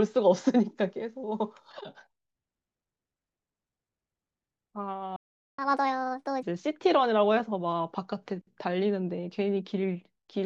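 Speech recording with two linked playback faults. At 5.16 s the sound goes silent for 0.42 s before carrying on, a playback stall, likely from the player running short of data; it is a clean, sustained gap, far longer than a brief dropout. From 5.59 s to 6.43 s comes catch-up at higher speed: speech runs 1.5 times fast and its pitch rises roughly seven semitones, unlike time-stretching, which would keep the pitch steady.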